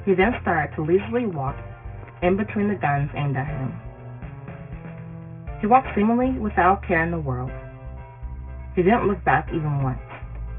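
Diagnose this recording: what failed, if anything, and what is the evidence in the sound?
Aliasing runs through the whole recording, and it points to a sample-rate conversion stage. The audio stops sharply at 3 kHz, which fits a downsample to about 6 kHz with no anti-alias filter. Content that sat above 3 kHz has folded back below it as gritty, metallic tones unrelated to the source, roughly 20 dB under the signal. On a spectrogram, energy runs hard up to a flat ceiling at 3 kHz, with mirrored, wrong-way sweeps beneath it.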